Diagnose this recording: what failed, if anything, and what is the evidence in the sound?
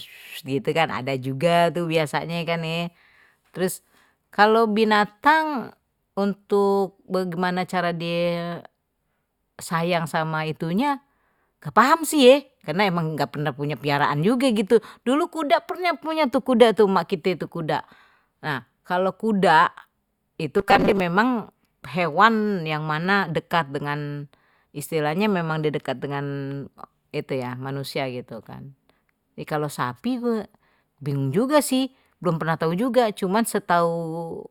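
At the driver or buffer stage, robotic sound from repeated short buffers runs from 20.59 to 21.00 s, turning speech into a metallic 200 Hz buzz. The likely cause is a starved buffer re-playing a 5 ms block for roughly half that stretch. A spectrogram shows rigid 200 Hz harmonic stripes, and the waveform shows identical repeating cycles.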